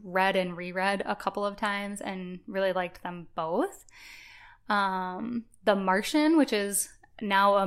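Speech, with a single sharp click at 0.66 s, just after "read and" and before "a couple of times". It sounds like dropped samples: the waveform jumps straight from one value to a later one, with likely only a couple of samples lost, a tiny fraction of a millisecond. Unlike a dropout, no sound goes missing and there is no audible gap, only the instantaneous step, which shows as a thin vertical line across the spectrum.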